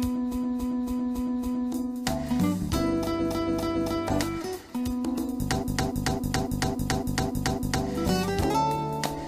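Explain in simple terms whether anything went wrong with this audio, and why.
Repeated frames occur from 0.30 to 1.70 s, 3.18 to 4.02 s and 5.60 to 7.83 s. In each, a 0.28 s chunk of the compressed audio was stored or sent more than once, so it plays again 5, 3 and 8 extra times. The result is a stutter, and the recording runs about 4.5 s longer than it should.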